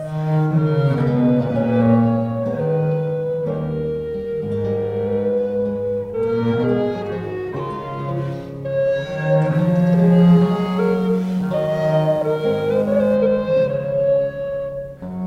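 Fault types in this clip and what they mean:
Mains buzz: From 9.5 to 13.2 s a steady, raspy buzz sits underneath the audio, quiet and well below the main sound. It is built on 60 Hz, so it comes from a 60 Hz mains supply. Switching spikes from a dimmer, a rectifier or an unshielded cable get into the signal twice in every mains cycle, stacking harmonics of 60 Hz up into the kilohertz range.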